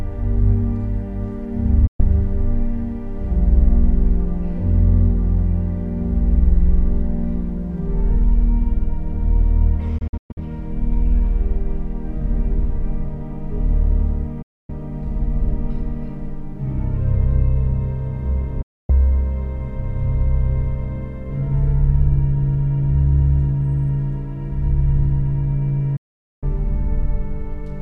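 Digital broadcast dropouts at 1.87, 9.98 (several short holes over 0.38 s), 14.42, 18.62 and 25.96 s: the receiver lost good frames and muted, cutting to silence with a quick 8 ms fade for 0.12 to 0.46 s each, and that audio is simply gone.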